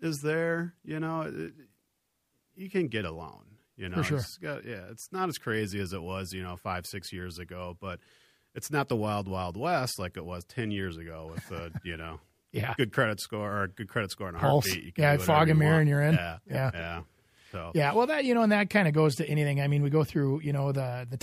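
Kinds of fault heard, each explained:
Electrical switching spike: at about 12.94 s a single very short burst, only a few milliseconds long, cuts sharply across the speech as a snap or tight cluster of clicks sitting on top of the sound, at around -30 dBFS. It is likely caused by a nearby switch, motor or static discharge arcing briefly, with the audio line picking up that electrical burst and adding it to the recording rather than it coming from the sound itself.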